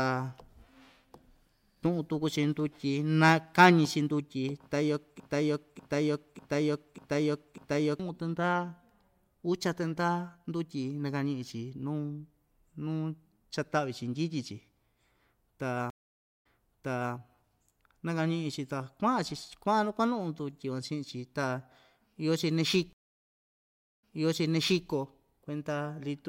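From 5.20 to 8.00 s a 0.6 s fragment repeats five times back to back, a broken-record loop, likely from a stalled player resending its last buffer.

At 15.90 s a stream reconnect leaves 0.5 s of silence, then resumes 0.74 s earlier; another at 22.93 s silences 1.07 s and rewinds 0.89 s.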